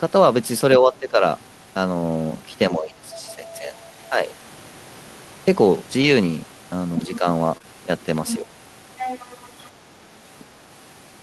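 From 0.79 to 1.22 s, 2.71 to 4.29 s and 9.90 to 10.26 s the speech sags by about 10, 15 and 25 dB at its deepest. This is likely speech suppressed in double talk: the echo canceller turns the talker down while the far side speaks.

From 6.01 to 6.11 s comes a lost packet rebuilt from error correction. About 60 ms, which points to three packets, was filled from low-bitrate copies. It sounds rough and noisy but leaves no gap.

From 7.57 to 7.62 s and 7.62 to 7.65 s, each short concealed packet loss covers a 20 ms hole by stretching the preceding sound. The result is brief smears, unlike the grainier texture of the error-correction patch.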